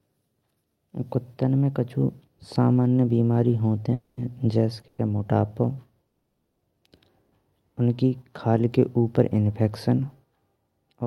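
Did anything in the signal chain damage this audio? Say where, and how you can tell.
Yes. A call audio freeze occurs at 3.93–4.19 s, 4.87–5.00 s and 6.07–6.63 s, at the network stage. The last sound is held as a fading buzz for 240, 110 and 540 ms, the longest dying to silence. The audio then resumes where it stopped, likely because late packets drained the jitter buffer.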